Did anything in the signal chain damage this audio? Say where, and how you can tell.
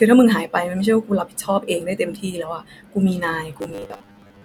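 Yes. From 3.59 to 4.44 s, robotic sound from repeated short buffers, likely in the driver: 10 ms loops force a rigid 100 Hz buzz, seen as flat, evenly spaced spectrogram harmonics.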